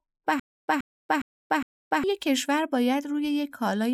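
Stutter with silent gaps, 0.40 to 2.04 s: a 125 ms speech fragment repeats four times between 285 ms silences, likely from stalled playback.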